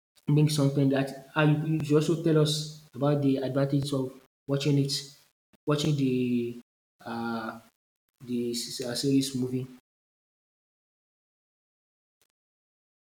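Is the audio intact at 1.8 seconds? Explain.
No. From 1.80 to 1.83 s there is an overlapping-chunks fault. A new chunk starts before the previous one ended, so about 23 ms of audio plays twice. It is heard as a brief stutter or click at the join, which fits processing in 2-second chunks.

A grainy, signal-following distortion also runs through this moment and the whole clip, roughly 40 dB below the speech. Quiet parts turn gritty. The likely cause is low bit depth without dither, consistent with rounding to 8 bits.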